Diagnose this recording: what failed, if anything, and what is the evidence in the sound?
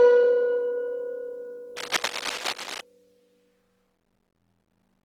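Codec stage: the music sounds grainy and rough throughout, not swirly as MP3 would, pointing to Opus compression at a low rate, likely near 16 kbps.

Analogue wiring: dense, uneven scratching from 1.76 to 2.81 s sits about 10 dB below the music. Unlike steady codec grain, this is likely cable scratch noise from a disturbed connector.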